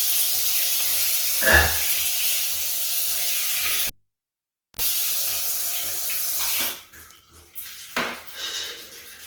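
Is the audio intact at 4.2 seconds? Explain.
No. At 4.2 s the sound is gone: the cable was pulled and plugged in between 3.87 and 4.82 s. A pop opens about 0.9 s of near silence, a 48 ms burst of 60 Hz mains buzz marks the tip touching, and a second pop restores the sound. The buzz and paired pops set it apart from a plain digital dropout.

Beneath that, the whole clip carries Opus compression: tones turn rough and grainy rather than swirling with MP3-style spectral holes, likely from a low bitrate near 16 kbps, with nothing above 20.1 kHz.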